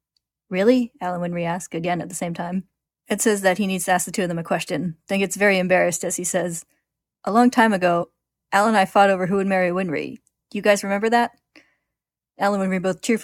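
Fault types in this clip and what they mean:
Damaged data in a compressed stream: Part of the encoded speech stream is corrupt, so the decoder cannot read those frames correctly. It loses its place and must hunt for the next valid frame header before playback recovers. In this clip it shows as one brief glitch from 8.01 to 8.04 s, lasting about 22 ms. It comes right after "long time". The glitch is short and isolated, with a quick return to clean decoding.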